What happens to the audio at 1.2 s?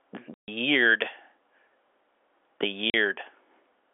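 Nothing goes wrong at 1.2 s: the speech carries on intact through the narrow telephone band of the G.711 line, which stays the same across that moment.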